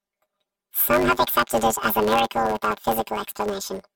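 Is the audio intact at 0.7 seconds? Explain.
No, planar audio read as interleaved runs throughout: each 10 ms left-then-right block is replayed as two half-length bursts, giving a robotic 100 Hz buzz rather than the octave-up pitch of longer blocks.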